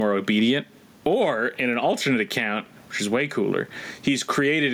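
Gain pumping runs throughout the speech, the level swinging by around 15 dB. The waveform envelope looks squashed and flattened, likely from gain set too high and a fast limiter clamping each loud sound. Room noise sits about 45 dB below the speech.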